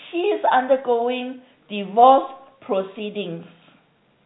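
No technical faults are audible.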